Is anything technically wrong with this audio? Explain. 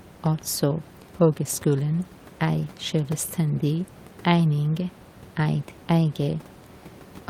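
No, nothing stood out on listening to this speech recording, and the faint room noise sitting about 24 dB below the voice is simply part of the recorded space.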